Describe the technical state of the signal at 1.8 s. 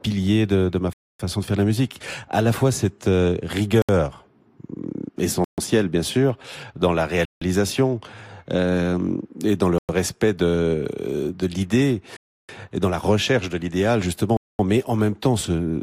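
At 1.8 s the speech signal is intact, with no audible dropout, distortion, glitch or other fault at that point.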